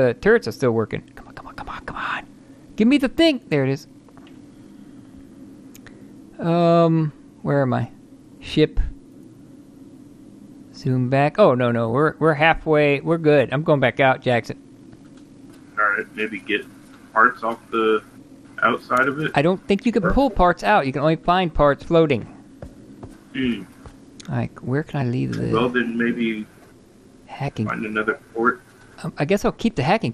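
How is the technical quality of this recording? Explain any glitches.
The technical quality is held back by plainly audible coding damage throughout, plus one short glitch near the end.

The MP2 compression artefacts run the whole length. The sound is dull, with a granular, gurgling edge. The likely cause is MPEG Layer II coding at a low rate, one that fits roughly 80 kbps. The coder splits the signal into 32 sub-bands and shares out a tight bit budget. Upper bands drop out and flicker. The bands that remain are coarsely quantised, which gives the grain.

DAB burbling appears from 27.36 to 27.48 s. It is a brief burble over the programme. Bit errors have slipped past error correction into the coded data, at a rate of around 0.2 percent. Corrupt samples put short blips of noise into single sub-bands, and corrupt scale factors make sub-bands jump in level for up to a frame. About seven frames are hit. 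That produces the short burbling burst.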